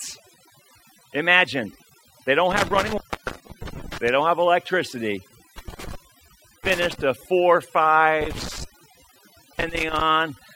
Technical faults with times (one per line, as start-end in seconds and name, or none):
0.00-10.55 overdone noise removal
2.51-4.09 intermittent contact
5.58-7.01 intermittent contact
8.21-10.01 intermittent contact